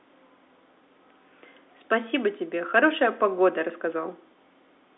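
No technical faults can be heard anywhere in the speech. The G.711 telephone coding working as intended gives it a narrow line band of roughly 300 Hz to 3.6 kHz, with nothing heard above 3.8 kHz.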